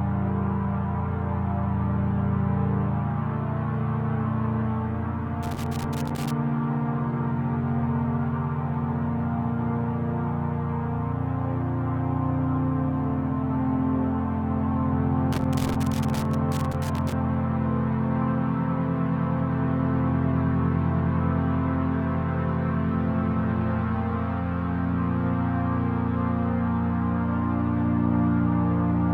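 An irregular burst of crackle and scratching breaks into the sound from 5.43 to 6.31 s, and a longer one from 15.32 to 17.12 s, with the signal chopping in and out. This is loose connector crackle: a worn or dirty contact in the signal path makes and breaks connection as it moves, cutting the audio in ragged fragments, while any DC on the line turns each make or break into a pop.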